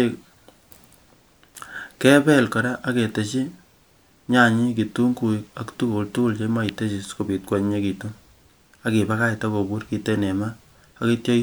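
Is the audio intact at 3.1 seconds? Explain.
Yes, the audio is intact at 3.1 seconds, with no dropout, click, distortion or other fault audible at that point in the speech.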